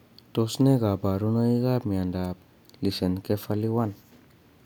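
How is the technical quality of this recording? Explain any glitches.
There's one glitch worth flagging: an electrical switching spike at about 2.24 s. It's a quick, sharp snap sitting on top of the speech, peaking around -25 dBFS. The likely cause is a nearby switch, motor or static discharge arcing briefly, with the audio line picking up that burst of interference.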